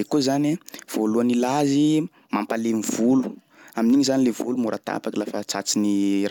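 Nothing stood out on listening to this speech recording.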